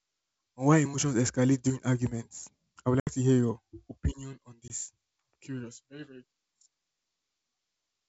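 Packet loss on an ADPCM call leaves the G.722 decoder's predictor and step size out of step with the sender's. At 3.00 to 3.09 s, after "arguments I would", roughly seven packets (70 ms) drop to a hard-edged silence. The sound resumes at "to hear your opinion" slightly distorted before settling. At 4.68 to 4.71 s, after "hear your opinion on", a couple of packets (20 ms) leave a shorter hole with the same brief distortion.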